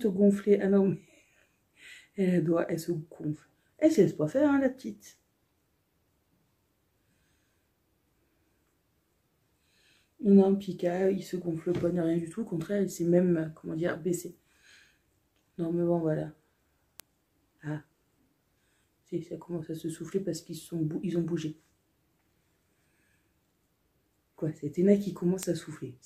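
At 17.00 s a bit error spike produces a single sharp tick, and a second one follows at 25.43 s. Each peaks at about -13 dBFS. A flipped bit in the stored or transmitted data throws the sample value off by a power of two, and the next sample snaps back. The result is a broadband click with no relation to the surrounding sound. The first sounds like a one-sample jump, and the second fits two adjacent corrupted samples.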